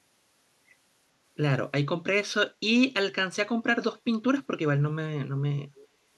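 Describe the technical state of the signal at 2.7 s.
The signal at 2.7 s is intact, with no audible fault at that moment.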